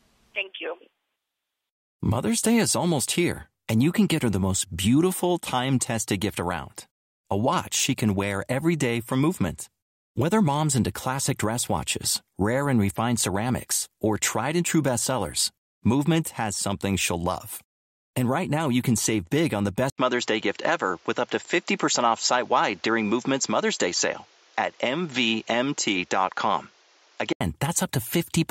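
A speech clip. Just after "save big on the", at 19.90 s, an 80 ms silence falls and the sound turns duller until 27.41 s. Nothing reaches above 7.6 kHz. A new noise floor sits about 35 dB down, at roughly unchanged level. The input likely switched to a poorer device.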